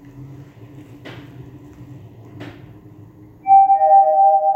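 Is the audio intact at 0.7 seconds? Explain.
Yes, the audio at 0.7 seconds is intact, with no fault present at that moment.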